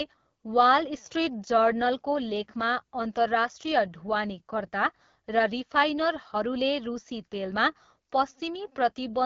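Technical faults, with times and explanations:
Throughout, AMR wideband (HD Voice) codec: speech sounds rough and raspy, as expected near 8.85 kbit/s, with nothing above 7.2 kHz and a noise-filled top band.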